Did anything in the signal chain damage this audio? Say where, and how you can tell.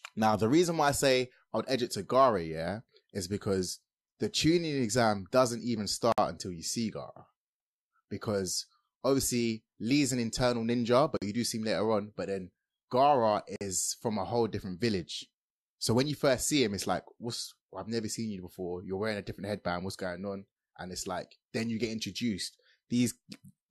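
Yes. The codec stage left a gap at a join of encoded pieces three times: 6.12 to 6.18 s (56 ms, between "doesn't even" and "until you see"), 11.17 to 11.22 s (47 ms, after "an internal ninja"), and 13.56 to 13.61 s (49 ms, before "from a whole different"). Separately encoded segments were spliced with their encoder start delay and final-frame padding left in. The waveform drops to flat silence mid-sound, and the spectrogram shows a clean vertical blank with slightly smeared edges. Speech resumes exactly where it stopped.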